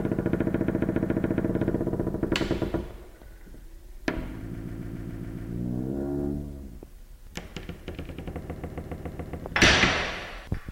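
At 0.49, 4.53 and 8.43 s you get repeated frames: a 139 ms block gets played seven extra times, stretching each spot by about a second. It's a quick, mechanical stutter.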